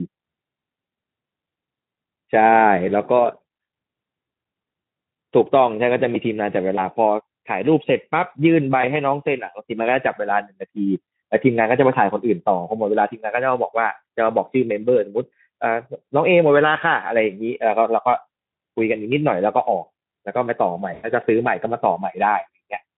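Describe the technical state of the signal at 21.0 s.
At 21.0 s the signal is in a VoIP packet loss concealed by the speech codec. The gap runs from 20.93 to 21.07 s. About 100 ms of audio never arrived, which fits five lost 20 ms frames. The Speex decoder fills the hole by repeating its last pitch and spectral shape at falling gain. The speech smears into a buzzy tone or coloured noise that fades. It stays weak or distorted for a moment after real packets resume.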